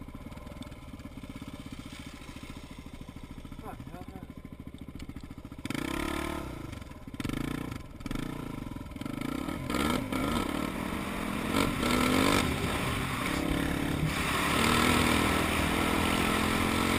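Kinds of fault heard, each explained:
Time-stretched section: processing likely squeezed part of the audio into a shorter length, holding pitch steady by dropping short slices. From 9.39 to 13.29 s the pace jumps abruptly to 1.44 times normal with unchanged pitch, leaving the sound rushed.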